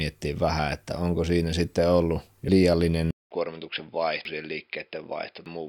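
At 2.49 s, right after "onko siinä sitten ollut", compressed frames are skipped. Roughly ten frames of about 93 ms each are lost. The speech jumps ahead about 0.7 s.

From 3.11 s the input likely switched to a poorer device. A silence of 200 ms comes first. Then nothing sounds above 5.2 kHz, the level drops about 5 dB, and new background noise enters.

More frames are skipped at 4.25 s, about 0.7 s lost, and at 5.46 s, about two frames or 0.2 s lost.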